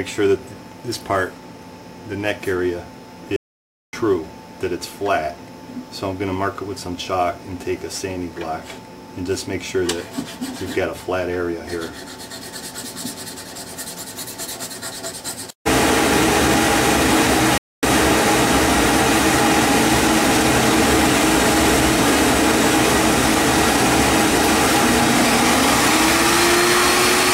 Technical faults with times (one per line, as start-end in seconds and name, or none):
3.36-3.93 playback stall
17.58-17.83 playback stall